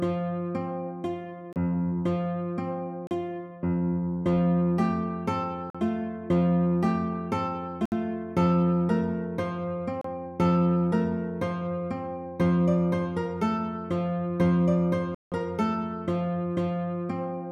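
Bluetooth stall gaps at 1.53, 3.07, 5.70, 7.86, 10.01 and 15.15 s: the sound drops to silence for 31 to 172 ms, likely because delayed packets emptied the headphone buffer.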